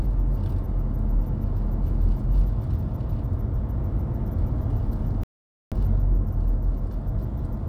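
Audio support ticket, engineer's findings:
Playback stall, 5.23–5.72 s: output likely starved of data or player thread blocked, buffer ran dry. Everyday sound cuts to silence mid-flow for about 480 ms, then resumes where it stopped once playback recovers.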